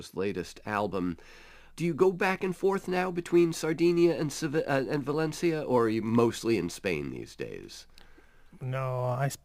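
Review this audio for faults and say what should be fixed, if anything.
A gritty, inharmonic fizz rides on the speech from 0.30 s to the end at 9.44 s, strongest on loud and bright sounds and sitting roughly 30 dB below them. This is crude rate conversion: samples were repeated on a fixed cycle with no filtering, which fits a 44.1 kHz to 48 kHz change, and the timing error creates tones unrelated to the speech. Resample with a proper band-limited converter instead of duplicating samples.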